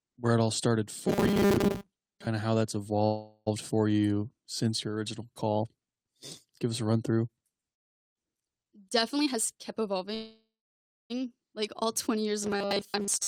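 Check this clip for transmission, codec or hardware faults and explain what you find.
Three kinds of transmission fault appear in this speech clip. There are two robotic stretches, two freezes and one speed-up.

Robotic sound from repeated short buffers occurs from 1.08 to 2.27 s, right after "where it all started", and again from 12.43 s to the end. The speech becomes a rigid, metallic buzz at 200 Hz. The likely cause is audio arriving too seldom, so short pieces get replayed. A 200 Hz buzz fits repeats of about 5 ms. Most of the real audio in these stretches is skipped.

A call audio freeze happens from 3.05 to 3.48 s, after "of how that's". The last sound is held and fades for 410 ms, with about 30 ms of silence. A second freeze runs from 10.14 to 11.12 s, lasting 954 ms, and 650 ms of it is silent. Delayed packets likely emptied the jitter buffer. Nothing is lost. The speech simply resumes later.

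A jitter buffer speed-up runs from 9.16 to 10.13 s. The receiver trims short pitch-period pieces to cut excess delay, removing about a third of a second. The speech plays at 131% speed with unchanged pitch, so it sounds hurried.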